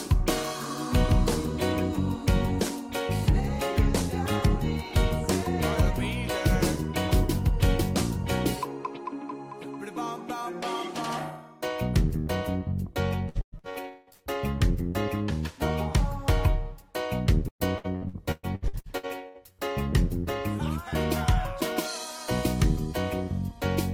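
Two stretches of the audio turn choppy and robotic, from 13.29 to 14.21 s and again from 17.48 to 19.61 s, with pieces dropping out. This is repeated packet loss (robotic sound): packets went missing again and again, and each hole was patched by stretching the preceding sound. More than half of the first stretch is filled this way, with breaks up to 183 ms. Over a third of the second is filled, with breaks up to 118 ms.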